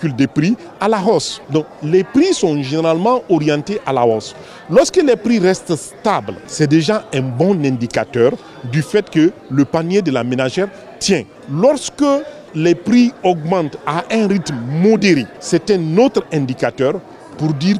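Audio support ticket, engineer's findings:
Engineer's findings: no fault found in the audio.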